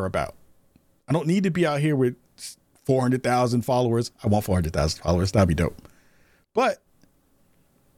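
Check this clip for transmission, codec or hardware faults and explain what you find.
No transmission, codec or hardware faults are audible here.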